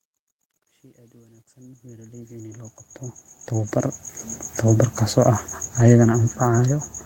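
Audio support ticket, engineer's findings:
Truncation distortion on the fade-in, 0.0 to 4.42 s. Grainy start, worst from 0.0 to 2.53 s while the level's lowest. The fade stage is keeping too few bits with no dither; the grit fits roughly 11-bit steps.

Lost packets rebuilt from error correction at 3.59–3.69 s, 4.67–4.69 s, and 5.79–5.89 s. No gaps, just brief rough, noisy patches of 60 ms, 20 ms and 60 ms. That fits three, one and three packets played from the low-bitrate copies.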